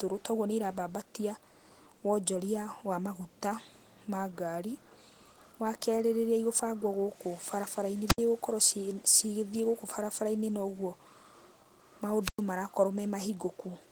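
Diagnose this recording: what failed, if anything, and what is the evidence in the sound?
The codec stage is the culprit for the steady damage: Opus voice compression runs the whole way through, with plainly audible hoarse, slightly robotic speech. That texture fits a hybrid-mode stream, SILK plus a thin CELT layer above 8 kHz, squeezed to about 16 kbps.

Separately, the radio link ahead of the mixer fails twice with a wireless microphone squelch dropout, at 8.07–8.19 s and 12.21–12.43 s. Each time the carrier fades, hiss rises, and the receiver's squelch mutes the output for about 74 ms and then 107 ms before the signal recovers.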